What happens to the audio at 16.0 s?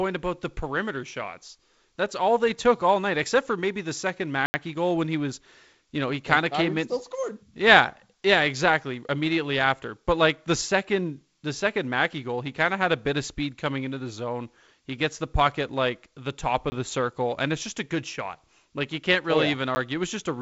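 Nothing goes wrong at 16.0 s: the speech there is intact, carried by G.722 wideband telephone coding at 48 kbit/s with nothing above about 7.7 kHz, the light hiss that coding leaves, and a little added noise in the lower band at that bitrate.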